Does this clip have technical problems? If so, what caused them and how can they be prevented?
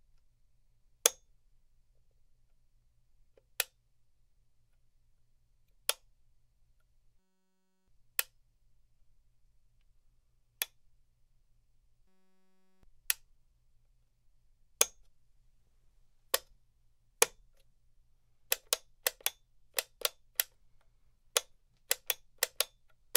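Yes. A system hang loop occurs twice, from 7.19 to 7.88 s and from 12.08 to 12.83 s. Each time the computer or driver stalled while the audio hardware kept replaying the same 5.33 ms of its ring buffer, which fits a 256-sample buffer. That fragment repeats about 188 times a second, so it is heard as a steady buzz at 188 Hz, and roughly 0.7 s of real audio is lost each time. To prevent it, fix whatever is freezing the system or driver.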